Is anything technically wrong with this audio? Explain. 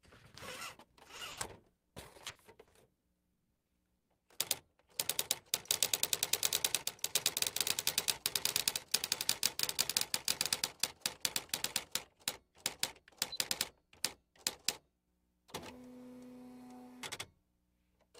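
Yes. The audio shows four kinds of fault, packed into the first eleven seconds of these sounds.

Short concealed packet loss occurs twice, at 1.07 to 1.11 s and at 1.17 to 1.21 s. Each time about 20 ms of audio did not arrive in time. The receiver patched the hole by extending the last sound, using its pitch if tonal and shaped noise if not. Then it blended back. Each sounds like a brief smear or wobble, and a very short sound may drop out.

A burst of packet loss follows at 1.31 to 1.39 s. Here about 60 ms went missing in one run. The receiver kept extending the last sound and faded it as the gap lengthened. A tonal sound becomes a short held buzz, and a noisy one a fading hiss. The audio then picks up further along, with that 60 ms gone.

Repeated packet loss, the robotic sound, runs from 1.77 to 4.21 s. Fourteen separate gaps hit this stretch, totalling 580 ms, with the longest at 160 ms. 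About a quarter of the span is patched rather than real. Each patch is followed soon by another. The result is choppy, with pieces of the sound missing.

A doubled audio track appears from 5.72 to 10.54 s. A second full-band copy of the same audio plays about one and a half seconds behind, roughly 5 dB quieter. It has no decay or room colour. It starts and stops abruptly at the edges of that span. The likely cause is a second, slower capture path or an edit holding two offset copies.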